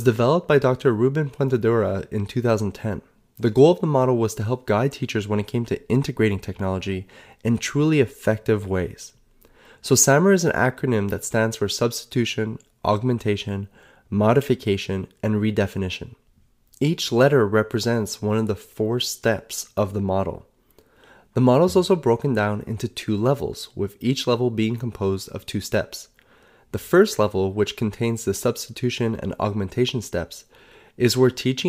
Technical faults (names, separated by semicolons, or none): repeated buffer